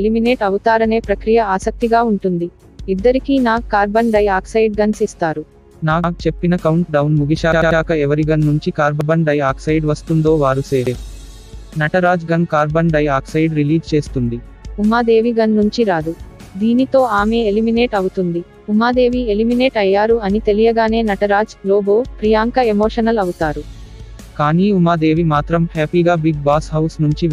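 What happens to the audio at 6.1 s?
At 6.04 to 6.13 s a repeated buffer occurs: a 93 ms block, consistent with a 4096-sample buffer, plays twice because new audio arrived late, producing a brief stutter with a hard join.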